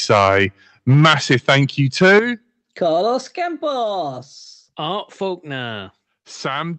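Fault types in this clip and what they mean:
microphone overload: You hear a harsh, crackly edge on the loudest peaks from 0.1 to 0.45 s, 0.89 to 1.59 s and 2.01 to 2.19 s. The waveform tops are flattened, roughly 6 to 10 dB past the converter's limit, with a small share of samples hitting the ceiling in the first two stretches and a noticeably bigger share in the last one. The likely cause is the mic input gain set too hot for the converter.
microphone volume stepped down: Twice the whole level, speech and background together, drops abruptly. At 0.94 s it's a small step of about 2 dB, and right at the end of the last distorted burst, at 2.19 s, it's a much bigger one of about 8 dB. That timing, straight after clipped peaks, likely points to the call software's gain control lowering the device input to stop the clipping, audible through a call path that tops out around 8 kHz.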